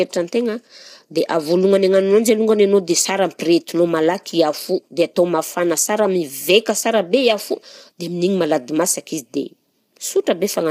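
Low-delay AAC compression runs throughout the speech. The voice sounds rough and grainy, with noise between the harmonics, likely from AAC-ELD's short frames, whose damage fits a bitrate around 32 kbps.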